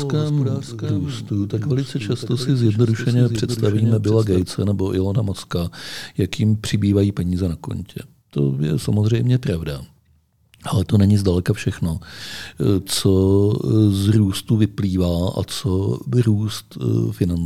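From the start until 4.42 s, a doubled audio track runs under the speech: one full-band copy trails by roughly 0.7 s, about 10 dB quieter, likely from a slower second capture path. Unlike echo, it carries no decay or room colour and stops abruptly.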